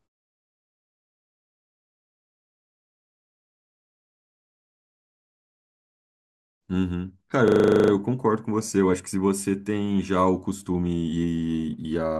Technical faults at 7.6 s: system hang loop

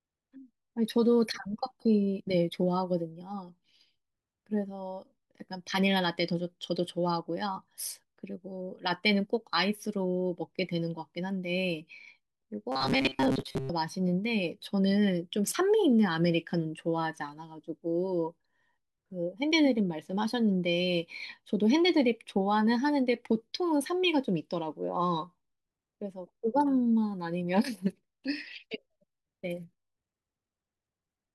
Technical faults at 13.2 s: robotic sound from repeated short buffers

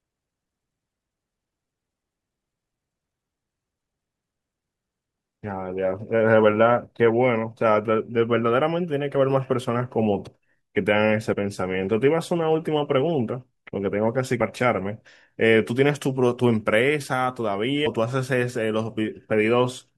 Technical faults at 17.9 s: compressed frames skipped

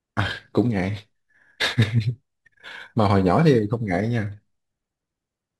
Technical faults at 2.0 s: crude rate conversion

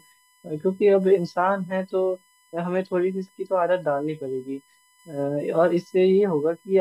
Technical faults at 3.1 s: USB whine

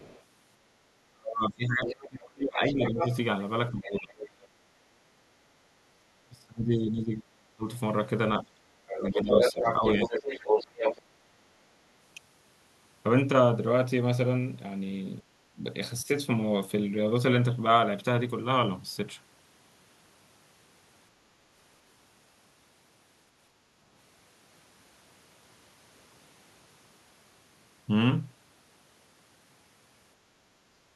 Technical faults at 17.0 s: none

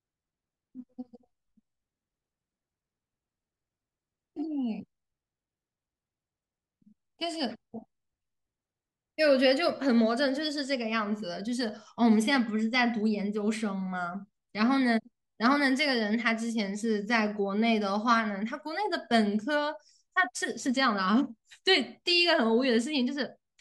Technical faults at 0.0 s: none

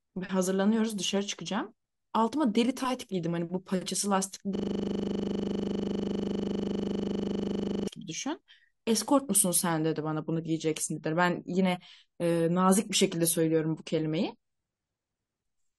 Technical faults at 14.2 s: adaptive stream at a lower bitrate

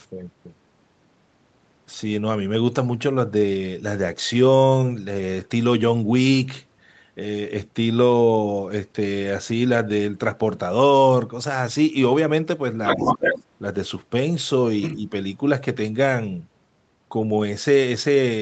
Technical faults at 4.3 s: none

